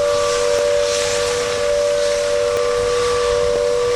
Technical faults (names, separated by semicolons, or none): periodic USB or driver dropouts